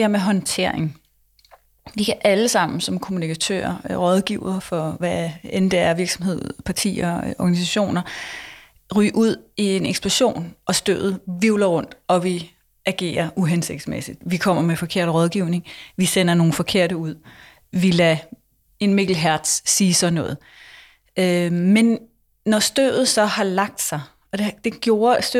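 No technical faults are audible.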